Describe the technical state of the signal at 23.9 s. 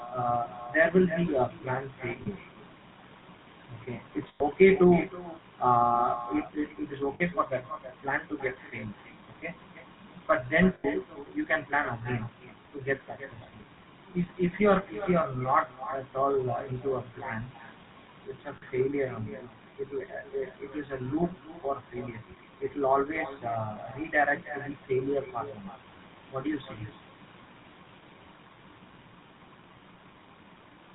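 At 23.9 s the speech carries an echo with no canceller, present across the whole clip. The far end's loudspeaker feeds its microphone, returning every syllable roughly a third of a second later, about 14 dB down and thinner. On a waveform each burst trails a smaller copy; a spectrogram shows faint duplicated patterns shifted right.

The same moment shows GSM full-rate codec damage, also throughout. Excitation built from sparse regular pulses gives a buzzy, gravelly roughness, consistent with a 13 kbps full-rate coder. A spectrogram shows nothing above 4 kHz and smeared, grainy harmonics below it.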